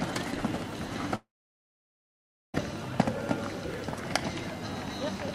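From 1.15 s to 2.55 s the sound breaks off in a long network dropout, likely lost packets. A fading concealment tail leaves roughly 1.3 s of silence, and the missing audio never returns.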